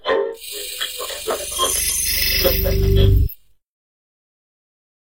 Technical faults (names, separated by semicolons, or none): frames out of order